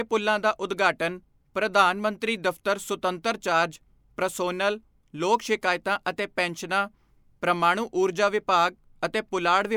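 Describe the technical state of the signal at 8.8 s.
At 8.8 s the signal is intact, with no audible technical fault at that moment.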